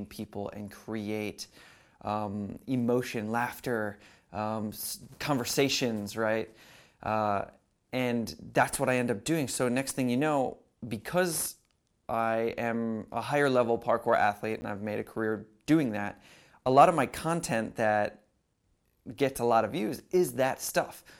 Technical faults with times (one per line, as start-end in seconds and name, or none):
14.61 block of digital silence